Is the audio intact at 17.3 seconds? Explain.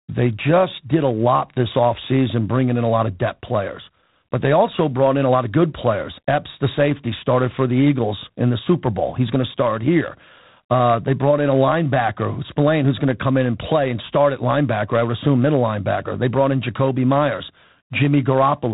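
No. At 17.3 s, as throughout, a harsh rasping hiss tracks the speech level and nothing passes above 3.8 kHz, the coarse-step noise of G.726 ADPCM, consistent with 24 kbit/s.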